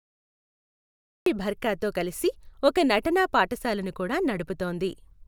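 The clip is speech. For the first 1.26 s there is nothing but flat digital silence, and then the audio snaps on mid-sound at 1.26 s with no natural onset or fade-in, so the opening syllable arrives already in progress. This is a cut-off start: capture or streaming began late, after the talker had started, so the beginning of that sound was never recorded and the silent stretch is simply empty signal ahead of it.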